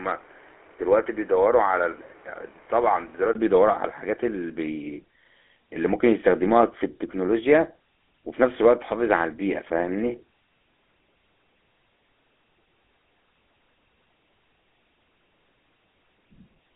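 From start to finish the speech carries GSM full-rate codec damage: the vocal-tract model with coarse pulse excitation gives a plainly audible buzzy, gravelly roughness, band-limited to roughly 250 Hz–3.5 kHz.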